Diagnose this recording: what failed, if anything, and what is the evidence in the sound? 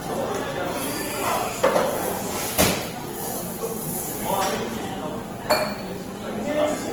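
The codec stage is the likely culprit: the whole clip has the rough, grainy texture of Opus compression in its CELT music mode. Tonal parts turn noisy rather than swirly, pointing to a starved bitrate around 16 kbps. The band still reaches about 20.2 kHz.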